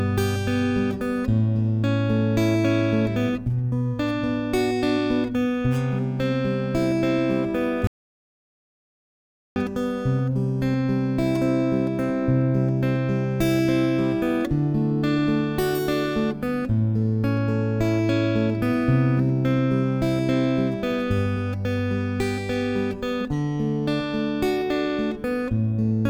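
At 7.87 s the audio drops out to silence and stays gone until 9.56 s, about 1.7 seconds of nothing at all. It's true silence rather than a quiet patch, since the room tone vanishes along with everything else, and the sound cuts off and resumes mid-flow. Whatever happened in that stretch simply isn't there. The likely culprit is the input going away for a moment, say a loose connection, a dropped link or an accidental mute, while the recorder kept writing silence.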